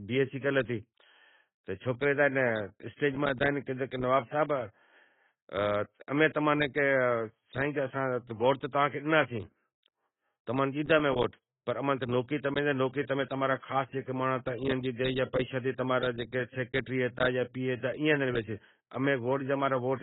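From start to finish the speech is band-limited, with nothing above about 3.8 kHz, and has heavy codec damage: dull, smeared consonants, with warbling or fizzy texture on sustained sounds and sibilants. The likely cause is AAC-LC compression at a low bitrate, consistent with around 16 kbps, where the coder lowers its cut-off and either leaves holes in the spectrum or fills bands with substitute noise. A simple low-pass filter would sound dull but clean, without this shifting, smeared texture.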